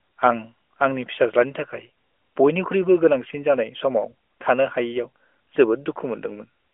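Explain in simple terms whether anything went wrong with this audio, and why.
Nothing went wrong here: the speech comes through a narrowband mobile phone codec (AMR) that is working as designed, so it has the usual phone-call sound with nothing above about 3.6 kHz, and no faults can be heard.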